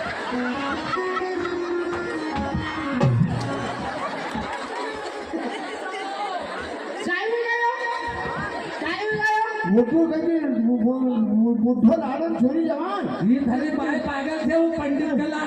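No technical faults are audible.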